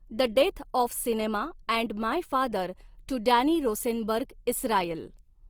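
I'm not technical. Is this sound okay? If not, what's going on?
No. The speech was most likely squeezed hard by Opus compression, which keeps the overall shape of the sound but fills in missing detail with approximations. Throughout the clip, from start to finish, the voice comes across plainly rough, grainy and hissy.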